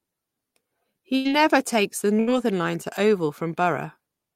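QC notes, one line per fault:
1.15–1.30 s, burst of packet loss: the sound holds as a brief buzz or hiss that fades for about 94 ms, then jumps ahead. Several consecutive packets were lost, and the receiver extended the last sound while lowering it. About 60 ms of speech never arrives.
2.20–2.38 s, burst of packet loss: again a short sustained, decaying tone, about 76 ms this time, followed by an abrupt restart further along. The receiver stretched the final received sound across the missing packets, and about 60 ms of speech is lost.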